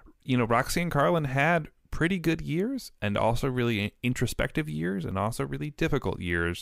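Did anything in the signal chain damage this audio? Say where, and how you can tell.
No, nothing in this speech recording stood out as damage from any stage of the signal chain on listening.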